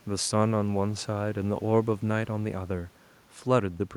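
The speech signal shows no technical faults, with only the room's own background noise present at about 34 dB below the voice.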